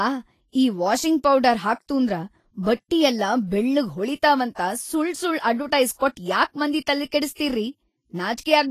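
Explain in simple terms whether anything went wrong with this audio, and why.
Throughout the speech, the treble sounds hissy and grainy, with nothing above 14.2 kHz. The likely cause is Vorbis compression, squeezing the file too hard.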